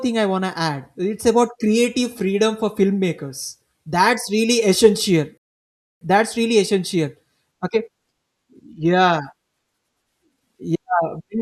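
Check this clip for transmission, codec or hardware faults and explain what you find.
One fault is present. At 5.38 to 6.01 s there is a rebuffering stall. Playback ran dry and paused for about 0.64 s. The speech then resumes exactly where it stopped.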